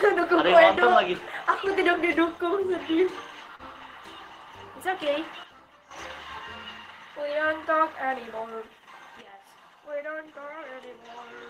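At 3.55 to 3.62 s there is a short concealed packet loss. About 40 ms of audio never arrived, and roughly 35 ms was filled by extending the preceding sound before blending back. It is heard as a brief smear or wobble. On a spectrogram, a narrow band of repeated, slightly blurred texture replaces the real detail.

At 5.44 s a sudden gain jump drops the level by about 10 dB in a single sample, and it snaps back at 5.91 s. At 9.21 s a second drop of about 9 dB lasts to the end. In both, the sound and its background fall together, most likely from a gain setting applied without a ramp. The waveform shows abrupt step changes in envelope height with no taper, and the spectrogram darkens uniformly across all frequencies at those instants.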